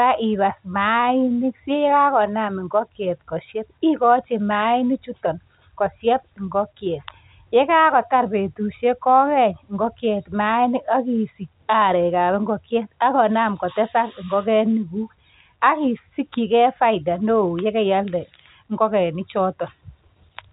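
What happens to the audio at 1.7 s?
Nothing goes wrong at 1.7 s: the speech carries on intact through that moment, with only the usual narrow telephone band of G.711 coding, which stops just short of 4 kHz.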